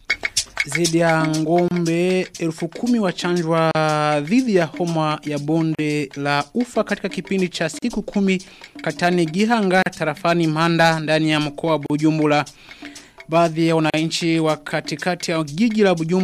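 Separately encoded pieces were joined untrimmed, leaving encoder delay and end padding in place: a gap at a join of encoded pieces, about every 2 s, at 1.68 s (28 ms), then 3.71, 5.75, 7.79, 9.82, 11.86 and 13.90 s (38 ms each). Each is a brief, soft-edged dropout before the sound resumes where it stopped.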